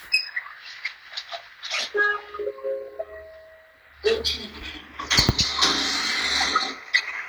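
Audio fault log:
Nothing stood out on listening to these sounds.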